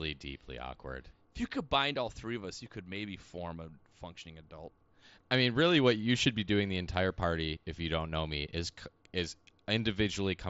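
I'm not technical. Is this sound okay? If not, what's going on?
Yes, the speech has no technical faults; it came through a Bluetooth headset link using the mSBC headset codec, which is why nothing above about 7.7 kHz is present, and that is normal for this kind of connection.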